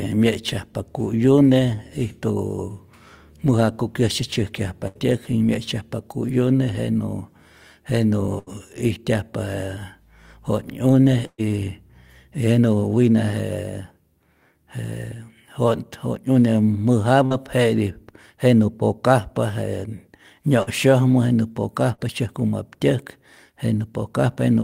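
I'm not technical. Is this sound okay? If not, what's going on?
No. Two kinds of dropout affect this speech. A burst of packet loss at 4.87, 8.39, 11.27 and 17.26 seconds drops up to 0.12 seconds: the last sound is held as a fading buzz or hiss, and the one at 11.27 ends in brief silence. Short concealed packet loss at 20.63 and 21.95 seconds leaves only a quick smear or wobble, which is shorter than the held buzz or hiss.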